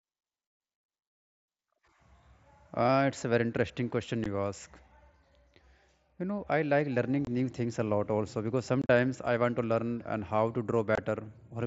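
Speech broken by four brief, hard-edged dropouts: a gap at 4.24 s, short holes from 7.25 to 7.27 s and 10.95 to 10.98 s, and a rougher, chopped patch from 8.82 to 8.89 s where several gaps cluster. This is unconcealed Bluetooth headset packet loss. Voice packets between headset and phone never arrived and were replaced by silence or an idle pattern rather than patched over, which fits runs of 7.5 ms mSBC packets going missing over the wideband link.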